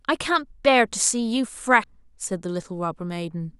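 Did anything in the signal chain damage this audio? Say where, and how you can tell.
Yes. Damaged data in a compressed stream at about 1.84 s, a problem at the codec stage: a brief glitch breaks into the speech there. A corrupted patch of the compressed bitstream made the decoder misread that frame, lose sync and hunt for the next valid frame header.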